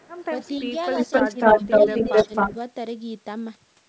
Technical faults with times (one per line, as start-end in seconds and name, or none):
0.00-2.55 echo leak
0.61-0.68 speech suppressed in double talk
1.23-1.65 speech suppressed in double talk
2.10-2.58 speech suppressed in double talk